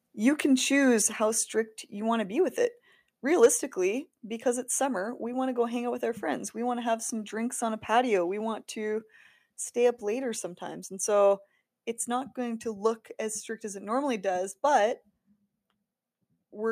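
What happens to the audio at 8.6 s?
Nothing goes wrong at 8.6 s; the speech carries on intact through that moment with no audible fault.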